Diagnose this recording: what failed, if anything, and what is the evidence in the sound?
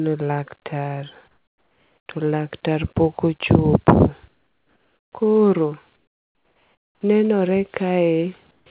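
Comfort noise in place of the background, at the call-processing stage. At 1.28 to 2.09 s, 4.28 to 5.12 s, 5.96 to 7.01 s and 8.51 to 8.66 s, the background turns flat and featureless and about 4 to 9 dB quieter. Likely discontinuous transmission, with the receiver synthesising shaped noise.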